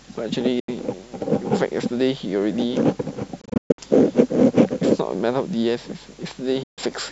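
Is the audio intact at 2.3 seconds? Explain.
Yes, at 2.3 seconds the speech plays through cleanly with no dropout, click, distortion or other fault.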